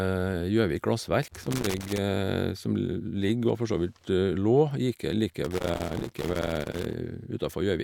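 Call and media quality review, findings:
Loose connector crackle on the speech, 1.28–1.98 s and again 5.29–6.94 s. Irregular scratchy bursts, signal chopping in and out as a worn or dirty contact makes and breaks. Any DC on the line adds the pops. Check the cable and jack.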